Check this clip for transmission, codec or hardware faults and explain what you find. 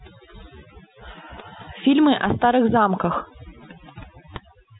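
The one real problem is overdone noise removal across the whole clip. A noise reducer pushed too hard mutes bands near its noise estimate, taking quiet speech with them, so the background drops and breaks up into twinkling specks. The telephone band stops around 3.9 kHz, which fits G.711 A-law at 64 kbps, and that part is working as it should.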